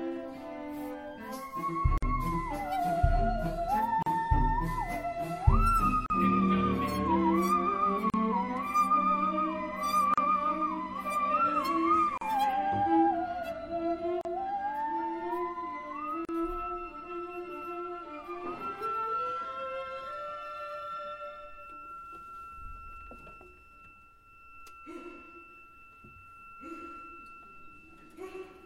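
A gap at a join of encoded pieces recurs about every 2 seconds: 1.98, 4.03, 6.06, 8.10, 10.14, 12.18, 14.21 and 16.25 s. Each is a gap of 38 to 48 ms with edges smeared by the codec. Encoder delay and last-frame padding stayed in at every join, and the sound then resumes where it stopped.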